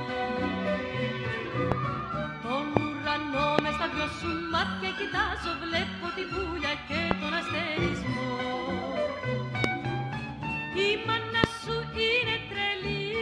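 Six loud pops cut through the audio, each about 20 ms long, at 1.72, 2.77, 3.59, 7.11, 9.64 and 11.44 s. Each jumps roughly 25 dB above the surrounding sound, which continues underneath. A voltage spike from a switch, plug, static or driver glitch is the likely cause.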